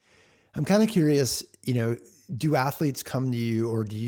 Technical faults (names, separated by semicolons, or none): none